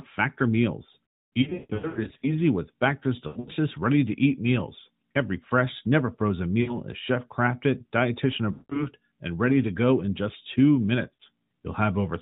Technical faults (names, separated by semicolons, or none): lost AMR speech frames